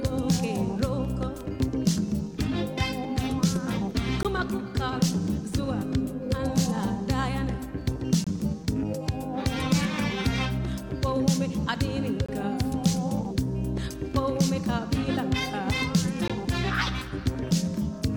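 Brief hard-edged dropouts to silence, roughly 17 to 25 ms long, interrupt the sound at 4.23, 8.24, 12.26 and 16.28 s. These are gaps between stream segments: 4-second segments whose timestamps don't quite meet, so the player inserts silence at each boundary without losing audio.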